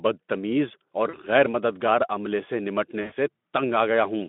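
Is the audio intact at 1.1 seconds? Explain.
No. At 1.1 seconds there is VoIP packet loss concealed by the speech codec, from 1.09 to 1.20 s, between "بدتمیز اور" and "غیر مددگار عملے سے". About 40 ms of audio is missing, which fits two lost frames. The Speex decoder fills the gap by extending its last pitch and filter with falling gain. This produces a brief, fading smear, a stretched buzzy tone or coloured noise. The sound stays weak for a short while after the gap.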